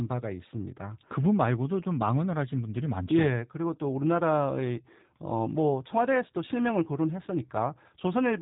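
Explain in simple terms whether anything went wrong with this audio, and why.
G.729 codec damage runs through the whole speech clip: nothing above 3.8 kHz, plus a rough, slightly synthetic buzz that simple muffling wouldn't add.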